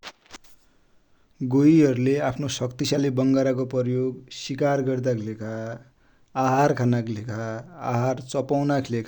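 No technical faults can be heard anywhere in the speech recording: the signal stays continuous and steady in level throughout.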